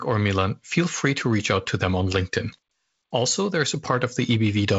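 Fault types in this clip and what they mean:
No faults turn up in this speech clip; it's carried over G.722 wideband coding at 48 kbit/s, which leaves a light touch of coding grain and nothing above about 7.7 kHz, just as that path normally does.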